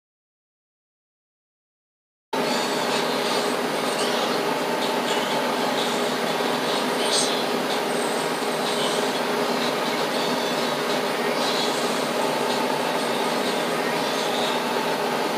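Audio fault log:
0.00–2.33 s, audio dropout to silence: the input feed was likely lost, through a disconnected device, a broken link or a mute, while the recorder kept writing silence. The dropout is already under way when the clip opens, so the first 2.33 s are silent with no room tone, and the sound then arrives abruptly mid-flow. Whatever happened during that gap is missing entirely.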